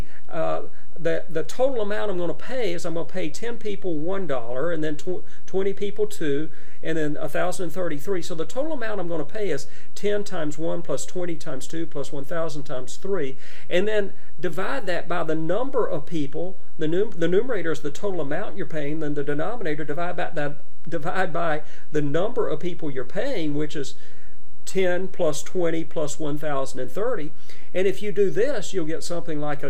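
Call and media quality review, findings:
DC offset, whole clip. Constant bias in the capture or conversion stage, probably an uncorrected input coupling or converter offset, shifts the entire waveform off zero, with the offset at about -15 dBFS. Not audible as a tone itself; shows as steady energy at the very bottom of the spectrum and eats headroom on one polarity.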